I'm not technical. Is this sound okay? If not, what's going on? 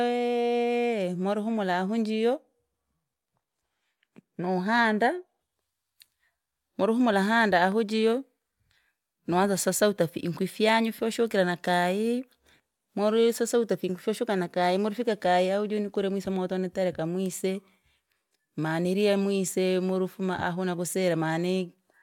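Yes, no faults can be heard.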